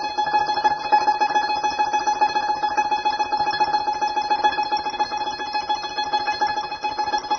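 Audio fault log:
throughout: AAC compression. The music has nothing above 6.3 kHz, and the band that remains sounds dull and smeared, with a warbling, fizzy texture on sustained tones. The codec damage is plainly audible and points to a perceptual coder, likely AAC-LC at a rate that fits about 24 kbps, cutting the top and starving the rest of bits. A simple low-pass filter would dull the sound just as much but leave what remains clean, without the warble.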